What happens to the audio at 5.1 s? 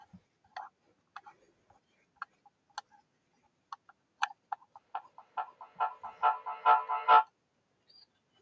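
At 5.1 s the speech is inside a stretch of feedback echo between two devices, running from 4.77 to 7.33 s. A second device on the same call replays this microphone's signal, which is picked up again, so each syllable returns about every 0.4 s. The loop grows to about 17 dB above the speech, so the repeats pile up into a ringing build-up. On a spectrogram this shows as stacked copies at regular spacing, and the waveform swells instead of decaying.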